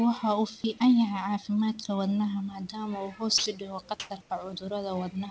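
At 3.38 s, just after "uu hoos", about 80 ms of speech vanishes and steady noise fills the gap until the sound resumes at 3.46 s. This is sound dropped by the voice detector, likely because it misjudged that stretch as background and stopped sending.

From 4.00 to 4.10 s and again from 4.22 to 4.30 s, the background, sitting roughly 33 to 34 dB below the loud parts, is replaced by comfort noise: flat, featureless hiss, likely generated by the receiver during discontinuous transmission. The first patch jumps up by about 18 dB, the second drops about 4 dB. Content above 8 kHz is absent across the clip, consistent with a G.722 call path.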